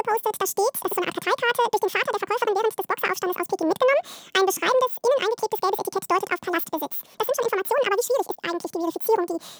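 Audio read two samples at a time (double speed) affects the speech from start to finish: the reader treated each pair of samples as a single frame, so playback runs at 2x speed and a full octave (12 semitones) high.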